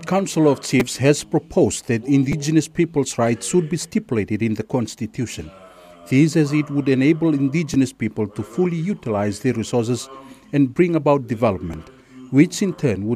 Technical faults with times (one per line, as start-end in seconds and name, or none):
0.80 repeated buffer
2.32 repeated buffer
4.91 repeated buffer
7.74 repeated buffer
11.73 repeated buffer